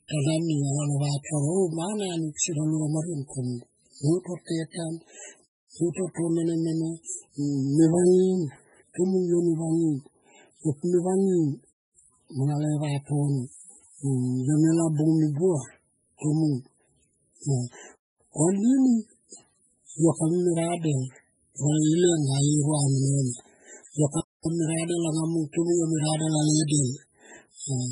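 Throughout, heavy MP3 compression is the likely cause: with bits starved, which points to roughly 16 kbps, weak frequency lines flicker in and out, so the speech sounds watery and swirly, with nothing above 10.5 kHz.

At 6.14 s a pre-echo occurs: quantisation noise spreads backward across its block, so about 25 ms of hiss precedes an attack that arrives smeared.

From 24.20 to 24.45 s a gap between chunks leaves 250 ms of silence at a join, fitting 6-second chunks, heard as an abrupt hole.

At 25.53 s, between "anga mung" and "tomung yo me", the same 25 ms pre-echo hiss blurs another attack.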